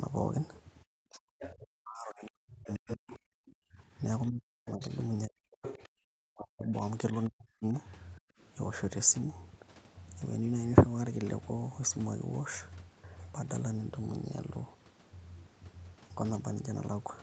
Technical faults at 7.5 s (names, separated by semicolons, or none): other side's voice leaking through; speech suppressed in double talk